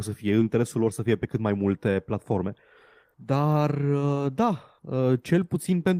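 At about 0.39 s, just after "să fie", the speech jumps abruptly forward with no gap, the two sides butted together. This is a skip ahead: roughly a second of audio was discarded, in transit or by an overflowing jitter buffer, while later audio was already queued.

From 0.55 to 2.44 s the speech runs about 8% fast at unchanged pitch, sounding hurried. This jitter buffer speed-up comes from the receiver trimming many short pitch-period slices, around 150 ms in total, to shed excess buffered delay.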